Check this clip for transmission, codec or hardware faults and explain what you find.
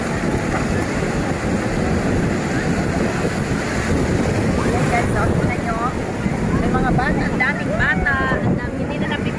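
No transmission or hardware faults turn up anywhere here.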